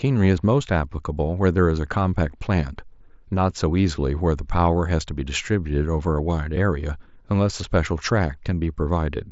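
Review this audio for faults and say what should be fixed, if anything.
Nothing here needs fixing; the speech simply comes through a Bluetooth mSBC headset link doing its usual job, with the sound reaching up to about 7.7 kHz as you'd expect from that wideband codec.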